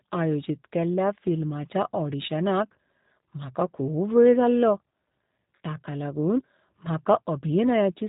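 Throughout, the speech carries G.729 codec damage. Nothing passes above about 3.8 kHz. Rebuilt from a vocal filter and pulses, it sounds rough and synthetic, fitting 8 kbit/s.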